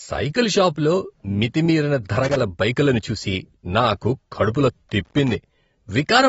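Throughout the speech, nothing sounds above about 7.7 kHz, and the codec damage is plainly audible: dull, smeared sibilants with a fizzy, warbling texture. This points to AAC compression, likely AAC-LC at around 27 kbps, where coarse quantisation lowers the cut-off and thins the spectrum.

From 2.16 to 2.41 s, right after "సైకిల్ షాపులో మితిమీరిన" and before "బైకులను చూసి నాకు కడుపులో", an irregular burst of loose connector crackle appears. A contact making and breaking chops the signal into scratchy crackle. It returns from 5.05 to 5.35 s, just after "బైకులను చూసి నాకు కడుపులో".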